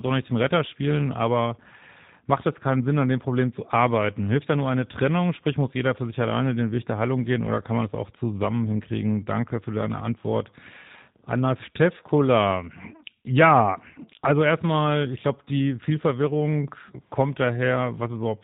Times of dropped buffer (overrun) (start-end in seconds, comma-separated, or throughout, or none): none